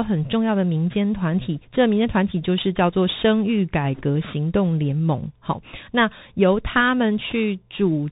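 The whole thing runs through a Bluetooth CVSD headset codec, and you can plainly hear it. The band stops at 4 kHz, s sounds come out scratchy, and there's a granular hiss sitting under the speech. That fits a 64 kbps stream where each sample is one bit saying up or down.

At 3.95 to 4.03 s there's a burst of bit errors on the Bluetooth voice link, a short rushing crackle rather than a sharp click, since each flipped bit carries little weight and fades out. The rate sounds like a couple of percent. It happens again, briefer, at 7.30 to 7.33 s.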